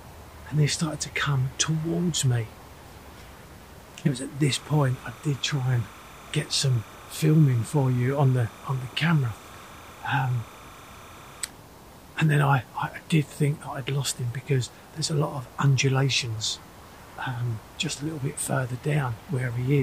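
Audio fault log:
4.48–11.46 s, timecode bleed: a thin, steady chirping warble sits behind the sound, flicking rapidly between two pitches near 1 and 2 kHz and staying well down in level, roughly 25 dB below the main sound. Linear timecode from an adjacent track or cable has leaked into the audio path. Its square-wave bit stream alternates between the two tones, and the steady repetition fits 30-frame code, which keeps the warble even for those seven seconds.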